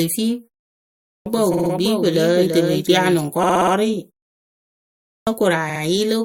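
At 1.02 s, speech resumes after a 0.61 s pause with about 0.24 s already gone. This clipped start after a pause comes from the output device dozing in silence and needing time to wake. Unlike muted pauses, which dip the background between phrases without losing any speech, here the opening of the phrase is truly missing, so it begins abruptly.

From 1.36 to 3.20 s, a doubled audio track runs: a second, full-band copy roughly 300 ms behind and about 5 dB quieter, most likely from a second, slower capture path. Unlike an echo or reverb, it has no decay or room colour, and it starts and stops abruptly.

Inside that stretch, at 1.53 to 1.71 s, repeated frames make a 60 ms block play three extra times, adding 180 ms. The clip stretches by the replayed time rather than echoing.

At 3.43 to 3.73 s, five extra plays of a 60 ms block add 300 ms of stutter.

At 5.02 s, the start is clipped again, losing about 0.25 s after a 0.99 s pause.

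At 5.69 to 5.81 s, two further repeats add 120 ms.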